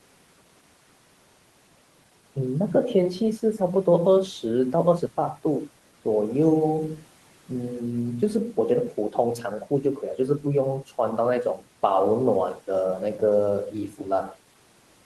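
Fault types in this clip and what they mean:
Speech cut by the noise suppressor: The suppressor mistook part of the speech for noise and turned it down with the background. From 13.9 to 14.06 s, about a tenth of a second of sound dips by up to about 11 dB and sounds swallowed, even though the room noise sits about 24 dB below the speech.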